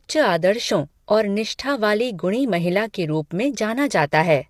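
Speech throughout, and the whole thing has a rough, grainy texture, with noise filling in between the harmonics and a thin, synthetic top end. That's most likely low-delay AAC compression (AAC-ELD), whose short frames blur pitch detail, and the damage fits a bitrate around 32 kbps.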